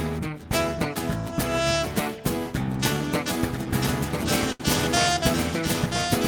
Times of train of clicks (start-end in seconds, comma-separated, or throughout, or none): none